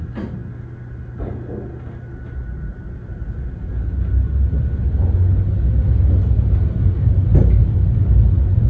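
Nothing here goes wrong: the sound comes over a WebRTC call path whose coding sounds like G.722, with nothing above 8 kHz, and nothing in it calls for attention.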